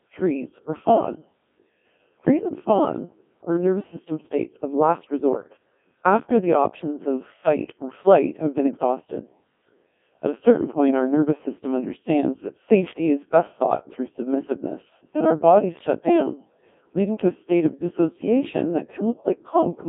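Robotic, buzzy speech runs through the whole clip, with a flat, synthetic tone and nothing audible above about 3.5 kHz, and the low end thinning out below roughly 200 Hz. This is the Codec 2 vocoder at work. Instead of keeping the waveform, it transmits only pitch, voicing, energy and a coarse spectral envelope, then rebuilds the voice from sine waves. The heavy damage here points to a rate of around 1.6 kbit/s, over a narrow radio-style band.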